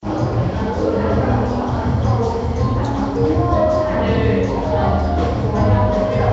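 Throughout the clip, the sound has a rough, hissy halo and a smeared, underwater blur, with nothing above 7.7 kHz. This is likely Nellymoser compression at a rate consistent with 32 kbps. Weak bands lose their bits and are refilled with noise, which shows on a spectrogram as a hard ceiling and speckled, blocky patches.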